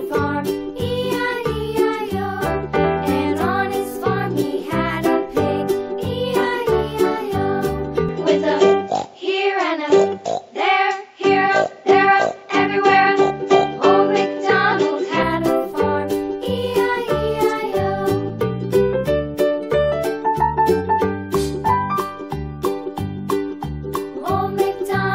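From 8.09 s to 15.23 s the sound turns duller and shifts a few decibels in level, with nothing above 7.6 kHz and a faint new noise floor well below the signal, then clears again. The likely cause is an input switched to a poorer device.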